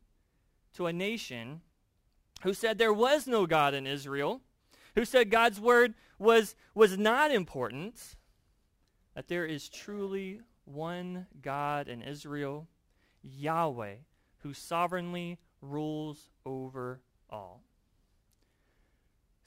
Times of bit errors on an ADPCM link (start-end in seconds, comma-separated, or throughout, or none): none